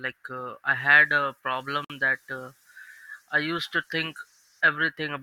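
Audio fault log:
1.85 to 1.90 s, gap at a join of encoded pieces: the speech drops out in a gap of about 53 ms and then resumes where it stopped. Separately encoded segments were spliced untrimmed, so encoder start-up delay and last-frame padding remain as a hole with smeared edges.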